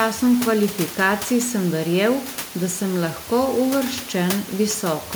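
No system faults are present in the speech, and the only background is the room's own noise, sitting about 16 dB below the speaker.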